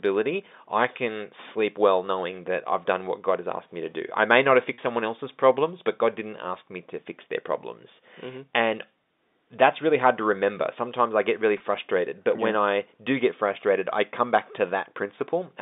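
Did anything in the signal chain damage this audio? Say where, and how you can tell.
Yes: brief buzzy holds after "I may not have" (4.74–4.78 s) and "I get really" (11.58–11.60 s) are network packet loss, bridged by pitch repetition of the last period.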